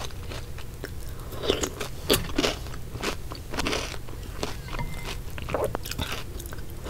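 Loud pops strike at 1.53–1.55, 3.13–3.15 and 5.75–5.77 s. Each is a sharp pulse, about 15 dB above the sound, the last near 20 dB. A likely electrical glitch caused them.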